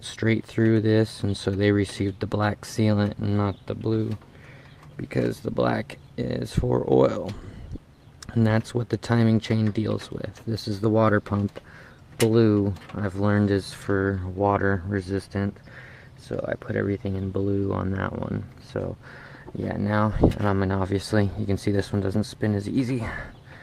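No audible technical faults across the whole recording.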